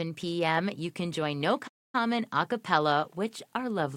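The audio contains a playback stall: output cuts to silence at 1.67 s and stays dead for about 263 ms, picking up again at 1.95 s. The likely cause is the player starving for data or its output thread blocking until it could refill the buffer.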